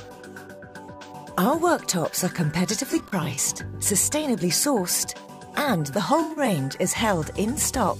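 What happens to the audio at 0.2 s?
Nothing goes wrong at 0.2 s; the audio plays through that moment intact.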